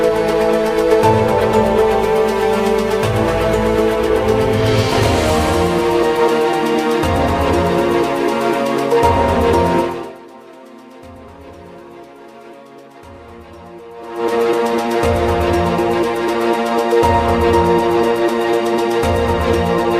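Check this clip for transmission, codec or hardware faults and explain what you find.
I find no transmission, codec or hardware faults in this clip.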